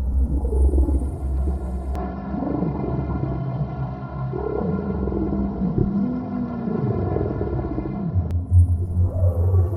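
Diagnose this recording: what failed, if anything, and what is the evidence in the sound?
At the driver and device level, the input was likely switched to a poorer device. From 1.95 s to 8.31 s the sound turns duller, with nothing above 6 kHz, and a faint new noise floor sits well beneath it. The change comes without any gap and with no obvious level jump.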